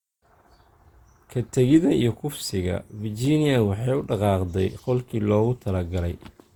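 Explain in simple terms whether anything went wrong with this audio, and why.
Across the whole clip, the speech sounds swirly and hollow, as if heard through a watery haze, and the starts of sounds are softened rather than crisp. This is generation loss. The likely cause is that the recording was squeezed with a lossy compressor, unpacked, and squeezed again, about four times over, which fits repeated Opus encoding. Each round throws away slightly different detail, so the damage piles up into that smeared, hollow quality.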